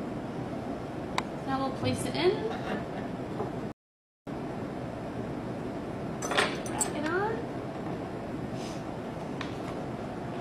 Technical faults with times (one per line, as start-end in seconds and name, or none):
3.72-4.27 rebuffering stall